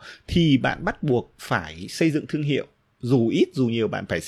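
Nothing in this bit of speech calls for comment; there's simply no technical fault to point to anywhere along its run.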